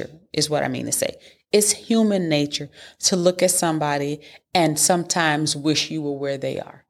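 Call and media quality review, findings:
No audible faults found in the speech recording. Nothing was heard that would point to a problem in any part of the call or media path.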